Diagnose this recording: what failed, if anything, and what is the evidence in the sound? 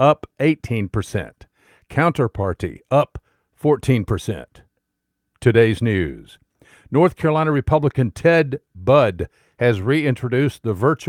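No fault detected.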